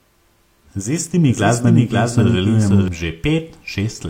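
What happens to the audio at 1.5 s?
A doubled audio track is in play from 1.28 to 2.88 s, likely from the signal being captured a second time over a slower path. A second, equally loud copy of the speech trails about half a second behind, dry and full-band, cutting in and out abruptly.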